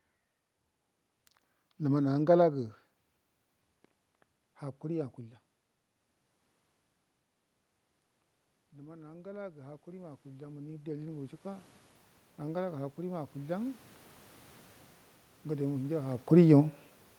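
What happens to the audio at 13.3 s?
At 13.3 s the audio is in the middle of an automatic gain rising event, from 12.39 to 13.87 s: the gain control judged the input too quiet and lifted its gain gradually, by about 3 dB. The room noise swells together with the speech, which separates it from a talker moving closer, where only the voice would get louder.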